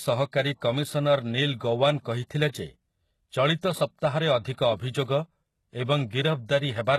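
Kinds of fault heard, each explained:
HE-AAC compression: The speech has a bright but synthetic top end that stops dead at about 12.3 kHz, and the s sounds come out gritty and metallic, with a lispy edge. This is likely HE-AAC at a very low rate, consistent with roughly 16 kbps. Only the lower spectrum is really coded, and the treble is patched in by copying lower bands upward under a coarse envelope, so the rebuilt harmonics don't line up with the real ones.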